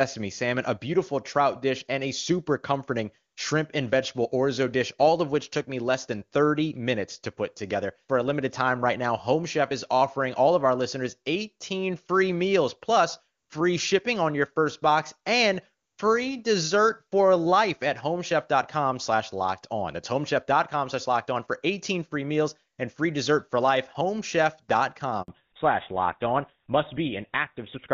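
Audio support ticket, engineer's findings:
Handover gap, 25.22–25.28 s: 60 ms dropout while the call switched networks; no speech frames arrived. Waveform shows a flat dead segment, spectrogram a full-height blank column.

Fallback to narrowband, 25.28 s onward: the wideband HD Voice stream (clean, consistent with AMR-WB near its top rate) gives way to a duller, rougher sound, which points to a GSM full-rate codec. Spectrogram shows a hard ceiling with nothing above 4 kHz.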